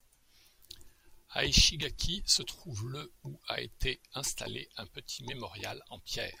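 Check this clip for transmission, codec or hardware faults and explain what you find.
Nothing turned up on listening here; the speech holds together the whole way with no faults of any kind to point to.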